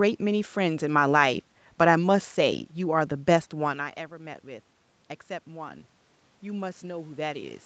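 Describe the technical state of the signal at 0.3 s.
At 0.3 s the speech comes through intact, with no fault at that moment.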